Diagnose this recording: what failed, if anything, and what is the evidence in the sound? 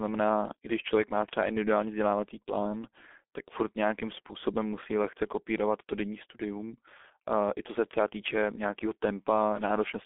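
The failure is at the codec stage: the speech has passed through G.723.1 and is heavily damaged throughout. The band runs from about 250 Hz to 3.5 kHz with nothing above 3.7 kHz, so it sounds muffled, and the voice is hoarse with smeared consonants. A clean narrowband phone line would share that band edge but keep consonants crisp. The blurring comes from 30 ms frames and a slowly updated voice model, and fits a rate near 6.3 kbit/s.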